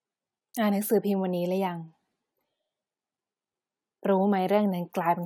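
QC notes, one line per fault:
Nothing to flag here, this speech clip comes through without any faults worth noting.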